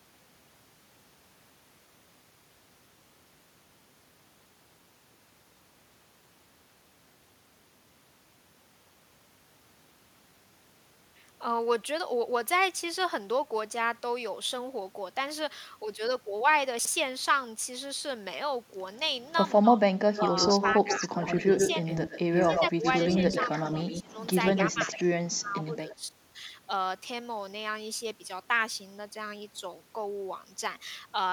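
Speech, with chunks out of order at 16.79 to 16.88 s: a 21 ms block plays three chunks late, heard as a jumbled blip and seen as hard vertical seams in the waveform. Speech suppressed in double talk, at 19.61 to 19.82, 20.55 to 21.84, 22.47 to 23.32 and 24.03 to 26.04 s, is likely an echo canceller clamping both talkers together, with dips of up to about 25 dB that show as gouged patches in the spectrogram. An echo leak, likely loudspeaker pickup not fully cancelled, returns a copy 114 ms late. From 20.15 to 25.04 s it sits about 5 dB below the speech, and from 25.64 to 25.95 s it is faint, about 25 dB down, visible as offset duplicate harmonics.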